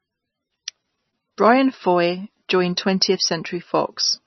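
MP3 compression damage runs through the whole speech clip, with nothing above 5.9 kHz, so sibilants lose their edge and the sound turns dull and watery. Heavy swirling and smeared onsets point to a likely very low bitrate near 22 kbps, where the encoder drops treble and flickers weak frequency lines.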